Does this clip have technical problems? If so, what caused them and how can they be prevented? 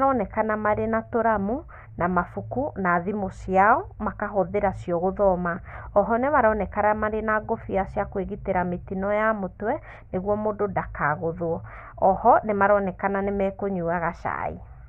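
No, nothing in this speech recording stood out as a technical problem on listening, so there is nothing to trace back or prevent.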